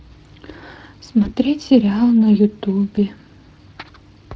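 Throughout the clip, the speech has passed through the Speex codec, at a rate that fits roughly 20 kbps. Its CELP model leaves too few bits for the excitation, and the coding damage is plainly audible as a grainy, hoarse roughness on the voice.

At 1.23 to 1.36 s, VoIP packet loss concealed by the speech codec occurs. Each gap fits one lost 20 ms packet. The decoder repeats its last pitch and filter at falling gain, so the sound smears into a brief fade. Because each frame builds on the last, the distortion lingers for over 0.1 s. A shorter repeat occurs at 2.95 to 2.98 s.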